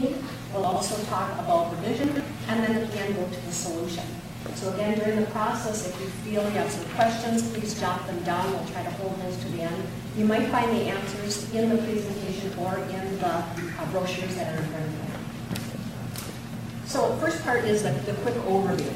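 Twice early on, the audio jumbles: between 0.64 and 0.76 s, and again between 2.04 and 2.2 s. That's chunks out of order. A block of roughly 40 ms showed up late and got played after the blocks meant to follow it, two blocks late the first time and three the second. Nothing's actually missing, but the shuffled sequence leaves hard joins at each seam, hence the garbled flicker.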